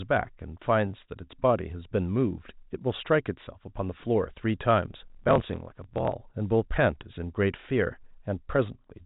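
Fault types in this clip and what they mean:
Block size mismatch (truncated): from 4.94 to 6.15 s the speech takes on a rough buzz at about 43 Hz and hurries forward roughly 1.12 times faster while keeping its timbre. One stage hands over longer blocks than the next stage takes in, so the tail of every block is dropped. The buzz rate fits a 1024-sample read, and the lost tails account for the speed-up, all heard over the narrow G.711 telephone band.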